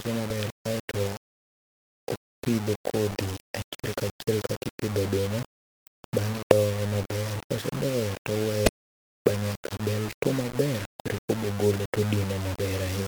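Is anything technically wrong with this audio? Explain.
Yes. The speech suffers from low bit depth without dither, and it lasts the whole clip. The sound has a coarse, grainy distortion that rises and falls with the speech. Quiet parts turn gritty, and the softest moments cut to silence or sputter between steps. The likely cause is quantisation to about 5 bits by rounding, with no dither added. The error tracks the signal. It sits roughly 10 dB below the speech, so it is heavy.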